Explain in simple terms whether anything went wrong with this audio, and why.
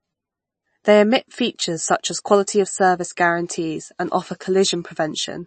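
Something did go wrong, and it lasts from start to finish. The speech sounds watery and swirly, and s sounds come out smeared and metallic. The top of the sound is missing. Nothing is heard above 8.3 kHz, so the speech sounds dull. The likely cause is heavy MP3 compression. To save space, the encoder cut off the treble and kept switching weak parts of the sound on and off. That flickering causes the swirl.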